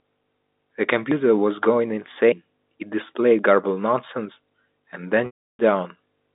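At 1.12, 3.39 and 4.32 s the speech jumps ahead. About 50 ms, 50 ms, then about a tenth of a second vanish, likely a dropped buffer (overrun). From 5.26 to 5.59 s, 330 ms of packet loss with pitch repetition repeats the last pitch period. It fades to silence, then cross-fades back. The gap fits roughly 10 ms packets over the band-limited telephone line.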